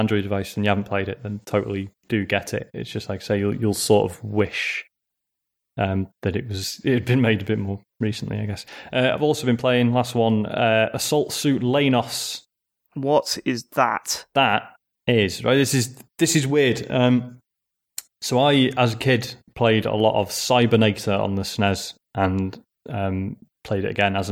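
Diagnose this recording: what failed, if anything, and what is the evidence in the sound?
Nothing in the speech signal points to a failure at any stage of the chain, from capture and conversion through to storage and playback.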